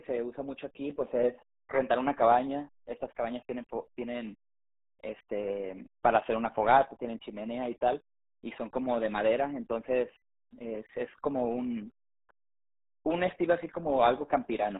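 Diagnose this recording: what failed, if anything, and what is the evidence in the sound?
The codec stage failed. The whole recording passed through the RealAudio 14.4 codec, and its starved bit budget, consistent with about 8 kbit/s, throws away everything above 3.8 kHz and crudely models the rest. The speech comes out heavily muffled and gargly from start to finish.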